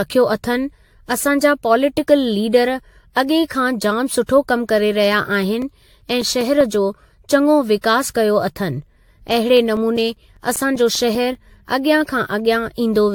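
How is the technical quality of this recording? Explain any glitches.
The recording is compromised throughout and has two stretches of clicking.

Generation loss runs through the whole clip. The speech sounds swirly and hollow, with smeared consonant attacks and nothing above 19.1 kHz. The likely cause is repeated lossy re-encoding, perhaps around seven AAC passes near 96 kbit/s, each adding fresh quantisation noise on a shifted frame grid.

CD scratch ticks appear from 5.23 to 6.61 s and again from 9.57 to 11.35 s, as regular ticks of roughly six per second of uneven strength. A scratch defeats the error correction once per disc revolution, so the player patches brief gaps of a few milliseconds, the longest under ten.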